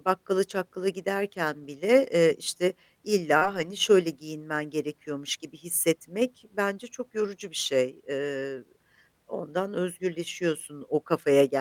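Speech clip with two kinds of network fault. A lost packet rebuilt from error correction occurs at 1.59–1.65 s (about 40 ms, which fits two packets) and again at 3.41–3.67 s (140 ms, consistent with seven packets). There is no gap in either place. Those stretches sound rougher and noisier because the decoder played the lower-bitrate copies carried in the following packets instead of the originals. A short concealed packet loss at 3.37–3.43 s left about 40 ms that never arrived. The receiver filled it by extending the preceding sound and then blending back into the real audio, which gives a brief smear just before the second rebuilt stretch begins.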